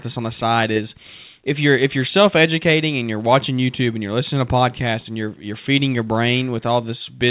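No faults are audible in this speech; the call path cuts everything above 4 kHz, which fits a narrowband telephone codec such as G.711 A-law.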